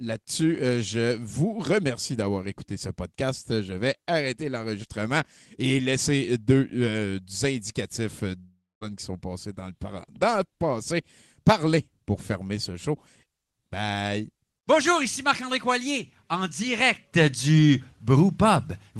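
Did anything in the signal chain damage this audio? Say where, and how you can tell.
Yes, at the network stage. From 8.37 to 8.83 s the speech breaks off. The last sound smears into a fading buzz, then about 0.22 s of silence, and roughly 0.44 s never returns. That's likely a long network dropout, with concealment running out.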